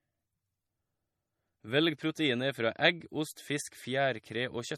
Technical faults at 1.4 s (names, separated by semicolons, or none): MP3 compression